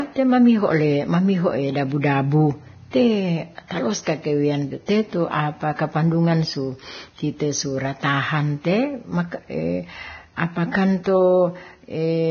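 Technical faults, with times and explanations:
Throughout: Vorbis compression, likely the cause of the hissy, grainy treble and roughened speech. The cut-off is lowered, and the coarsely quantised upper band turns fine detail into noise with blurred consonant onsets, heavy damage that points to roughly 18 kbps.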